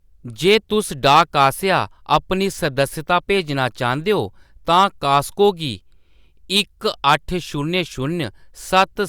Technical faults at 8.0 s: none

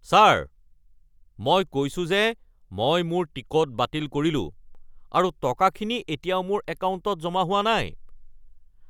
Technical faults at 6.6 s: none

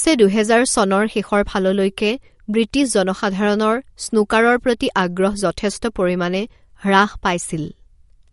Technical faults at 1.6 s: MP3 compression

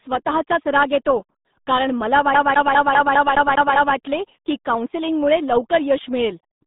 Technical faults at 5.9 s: RealAudio 14.4 codec

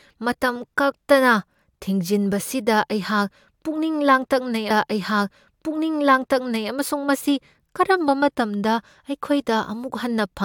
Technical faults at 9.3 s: none

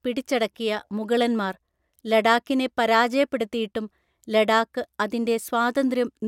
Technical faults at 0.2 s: none

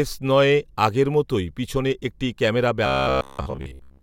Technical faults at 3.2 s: robotic sound from repeated short buffers

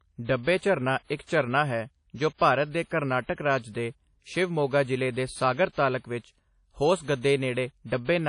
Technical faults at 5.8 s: low-bitrate audio saved at a high bitrate

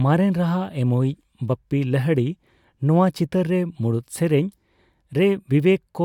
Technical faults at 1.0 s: none

